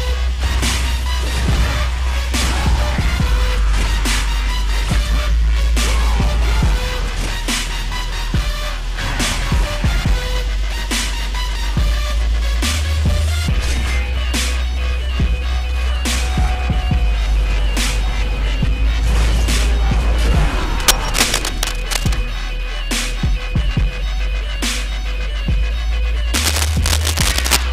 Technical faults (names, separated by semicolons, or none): cable scratch noise